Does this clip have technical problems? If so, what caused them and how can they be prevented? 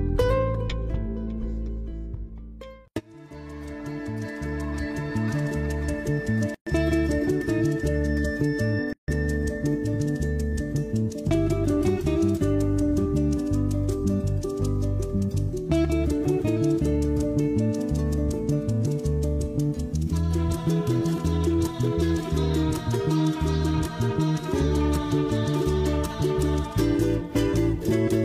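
Yes. Two gaps at a join of encoded pieces cut the sound at 6.54 to 6.67 s (about 122 ms) and 8.93 to 9.08 s (about 153 ms). Separately encoded pieces were joined untrimmed. Encoder start delay and final-frame padding left silence. Trim that delay and padding, or encode gaplessly, before joining.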